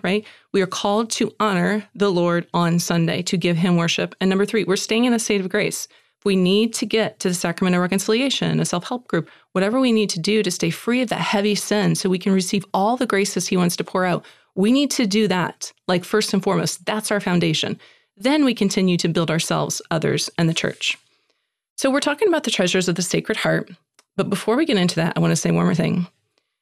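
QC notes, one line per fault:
No faults found in this speech clip. Nothing here needs a QC entry.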